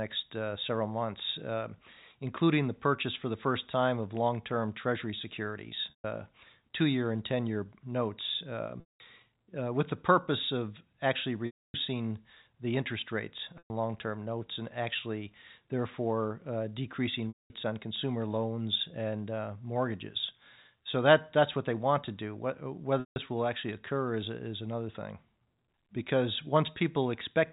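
Short buzzy holds that fade out interrupt the speech at 5.9, 8.8, 11.46 (after "purpose of actually"), 13.58, 17.28 (between "notes and actually therefore" and "on consumer loans and") and 23.0 s (before "will actually occur is"). Each lasts 120 to 280 ms. This is packet loss with pitch repetition: the receiver loops the last pitch period over each gap, in steps that fit 20 ms packets. Throughout, the audio carries the narrow, telephone-band G.711 coding, with nothing above 4 kHz.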